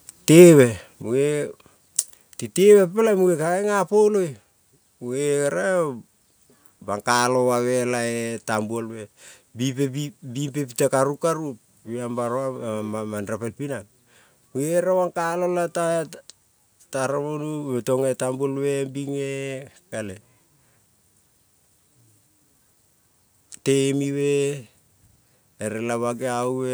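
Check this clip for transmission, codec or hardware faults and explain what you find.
One fault is present. At 1.02 s, a microphone volume step-down: the call software likely cut the input gain in one step, so speech and background abruptly fall by about 5 dB.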